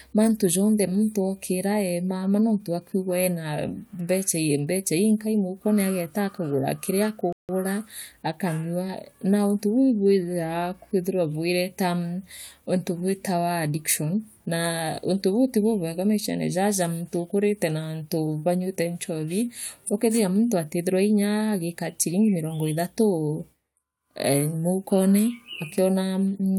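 At 7.33 s, just after "moukone ageta akagura kire", the speech stops dead in a rebuffering stall: the player exhausted its downloaded audio and paused for about 0.16 s until more arrived. Silence fills the gap, then speech resumes exactly where it left off, adding delay without losing anything.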